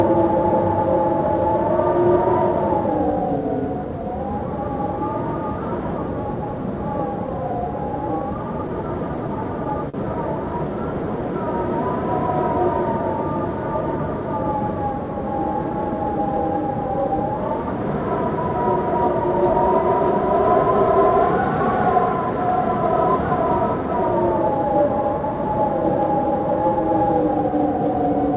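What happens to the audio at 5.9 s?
Nothing goes wrong at 5.9 s: the sound carries on intact through that moment, with only the 4 kHz upper limit that the G.711 mu-law call path sets on the whole clip.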